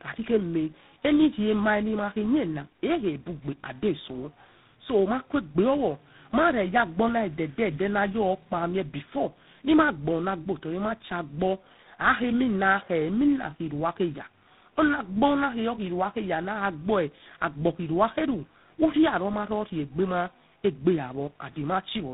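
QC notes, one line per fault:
Throughout: tandem speech coding. The call sounds like it went through two lossy speech coders in a row, a GSM-style coder and then something like 24 kbit/s ADPCM, with a plain telephone-grade hop between them. The second coder is working on the first one's already-damaged output, so the errors pile up: rough, warbly, and muffled, with nothing above about 3.8 kHz.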